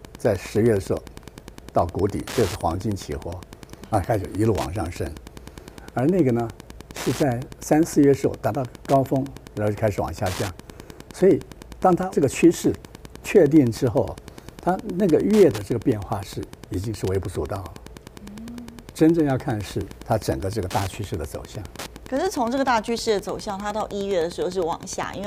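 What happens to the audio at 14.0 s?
At 14.0 s, as throughout the whole clip, a nearby Wi-Fi radio is coupling into the audio circuit, which rectifies its transmissions. This is Wi-Fi interference. Each beacon, repeating every 102.4 ms, becomes a short click, so the sound carries a steady ticking just under ten times a second. The ticking sits well below the main sound, roughly 20 dB down.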